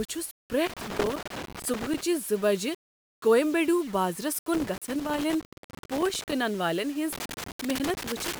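Throughout the speech there is grainy distortion that rises and falls with the voice, not a steady hiss, likely low bit depth without dither: rounding that fits roughly 6-bit audio, with error about 20 dB below the speech. Loose connector crackle breaks in at 0.66 to 2.01 s, again at 4.54 to 6.33 s just after "کویمبیڈو بازرس", and from 7.13 s to the end. A contact is making and breaking, chopping the signal into irregular scratchy bursts, unlike isolated clicks or clean dropouts.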